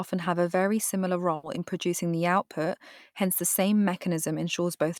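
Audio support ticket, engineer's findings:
Burst of packet loss at 1.35 to 1.45 s, right after "have a very similar", before "in producing the output". About 80 ms of concealment: last sound extended and turned down, decaying. About 80 ms of audio skipped on resume. Probable component: network path / jitter buffer, with receiver-side concealment. Spectrogram: smeared, repeated content fading out, then an abrupt change of content. Waveform: repeated last sound with shrinking envelope, then a discontinuity.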